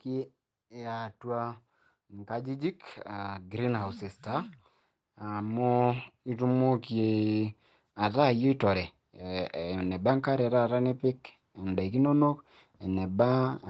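From 2.09 to 4.56 s the automatic gain is rising: the call's level control decides the speech is too quiet and pushes its gain up by about 5 dB, slowly, over roughly two and a half seconds. It happens again from 5.19 to 8.28 s, climbing about 6 dB. Each time the voice and the background noise swell together. The call's microphone processing caps everything at 8 kHz.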